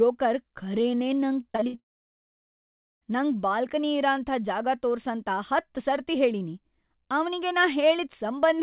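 Repeated packet loss (robotic sound) runs from 1.52 to 1.79 s: five short holes, the longest 60 ms, with the last sound stretched over each. Nearly half of that span is patched, so the speech turns choppy. At 1.79 s a long silence begins that lasts until 3.03 s, most likely a long network dropout. The concealed tail fades within a fraction of a second, leaving about 1.2 s of silence. Speech then resumes with that stretch missing, inside a band that stops at 4 kHz, which fits a G.711 call codec.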